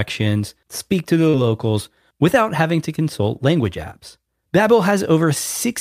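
A speech recording with short concealed packet loss at 1.29 to 1.43 s: about 40 ms never arrived, was synthesised from the preceding sound, and left a brief smear.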